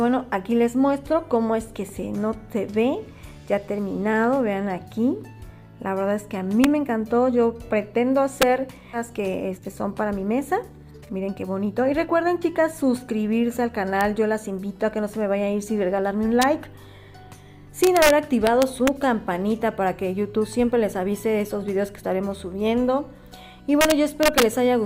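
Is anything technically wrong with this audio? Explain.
Yes. Three kinds of fault are audible.

Integer overflow at 6.64, 8.42, 14.01 and 16.42 s, and across 17.84 to 18.10, 18.47 to 18.88 and 23.81 to 24.43 s. A gain stage exceeded its integer range by up to about 3 dB and wrapped to the opposite sign instead of limiting. Each over-limit peak flips across the whole range, giving harsh cracks far sharper than ordinary clipping.

Skip ahead at 8.93 to 8.95 s. Audio was dropped while later material was already queued, losing roughly a second and a half. Playback jumps forward with no filler, so the sound on either side of the cut is spliced almost directly together.

Jitter buffer speed-up from 9.03 to 12.72 s. The buffer was holding more audio than its target, so the receiver repeatedly cut short pitch-period pieces, removing roughly 0.7 s in total. The sound runs at 118% speed with unchanged pitch and comes across as hurried.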